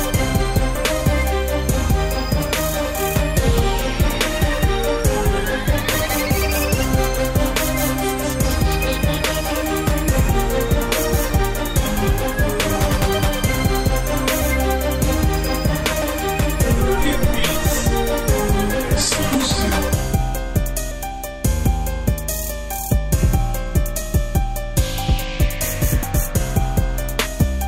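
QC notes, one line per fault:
0.75, 19.34, 20.91, 24.02 and 26.03 s: compressed frames skipped. The audio jumps forward by roughly 150, 30, 150, 30 and 100 ms, consistent with whole 32 ms frames missing or rejected by the decoder. Unlike a dropout, no silent gap is left.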